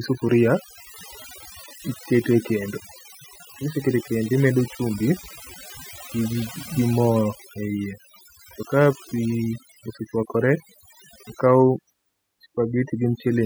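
From start to finish, the speech carries overdone noise removal: a noise reduction stage was set too aggressively for a noisy recording, so any frequency band sitting near its noise estimate gets pushed far down or shut off entirely, and the softer parts of the voice are cut away along with the noise. The background drops and breaks up into twinkling, chirpy specks.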